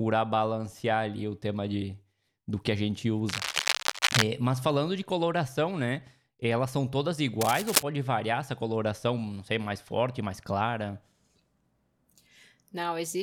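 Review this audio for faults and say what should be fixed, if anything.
Cable scratch noise from 3.29 to 4.23 s, after "do que a gente", and from 7.41 to 7.84 s, after "né elas são todas": bursts of scratchy, rustling noise about as loud as the speech, likely from a worn cable or connector being moved. Reseat or replace the cable and connectors, and secure them so they can't shift during recording.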